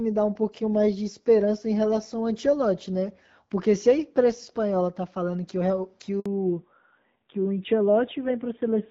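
At 6.20 s the speech drops out abruptly and stays silent for 60 ms before resuming at 6.26 s. This is a handover gap: as the call moved between networks, no speech frames arrived during the switch, so that sliver of speech is lost.

From 6.26 s to the end the speech sounds muffled and rougher, with nothing above 4 kHz. This is a fallback to narrowband. The clear wideband HD Voice sound before it fits AMR-WB at 12.65 kbit/s, and the coarser texture afterwards points to AMR-NB at around 7.4 kbit/s.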